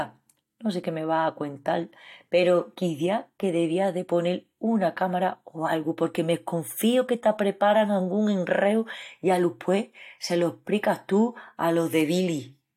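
The signal carries the speech without any audible technical fault from beginning to end.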